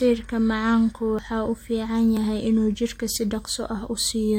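Tiny skips in the speech fall at 1.19 s, 2.17 to 2.19 s and 3.16 s, about a second apart. This is overlap between stream segments: adjacent one-second segments had overlapping timestamps, and trimming that overlap deleted real audio, so the waveform jumps.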